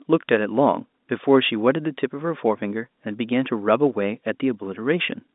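Speech with no technical fault to point to. What comes through is the ordinary sound of a G.711 telephone line, with the audio confined to a band of roughly 200 Hz to 3.7 kHz.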